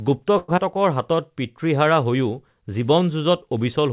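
From 0.38 to 0.50 s there is a call audio freeze. The stream stalls for about 100 ms, most likely because packets were held up in transit and the jitter buffer ran dry. The receiver stretched the last sound into a buzzy or hissy continuation that fades without reaching silence, then resumed where it left off, so nothing is lost but the speech is pushed later. On a spectrogram this appears as a smeared stretch continuing the preceding sound, and the waveform shows a decaying, regular stretch.

At 0.56 to 0.59 s comes a short concealed packet loss. About 40 ms of audio never arrived in time, and only around 10 ms of synthetic fill covers it, so roughly 30 ms of speech is dropped as the timeline catches back up after the earlier stall. It sounds like a quick smear or wobble with a slight jump forward. A spectrogram shows a narrow blurred seam with a discontinuity, all of it capped below 4 kHz by the narrowband G.711 call path.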